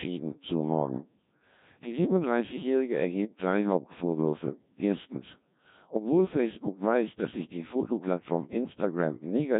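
The whole speech clip runs through a Codec 2 vocoder. Only pitch, voicing, energy and a rough spectral envelope survive, so the decoder rebuilds the voice from sine waves. It sounds heavily robotic and buzzy, with nothing above 3.8 kHz, which fits roughly 1.3 kbit/s.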